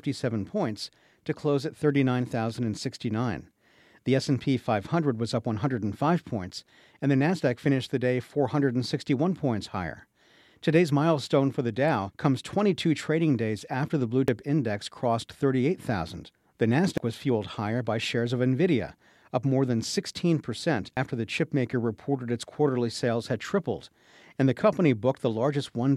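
Speech with compressed frames skipped three times: at 14.28 s, between "days after the blue" and "index crossed", about one frame (roughly 100 ms) vanishes; at 16.98 s before "was fueled higher by" the same; at 20.97 s before "the chipmaker reported its" about three frames, roughly 300 ms. Each jump is a multiple of a 92.9 ms frame.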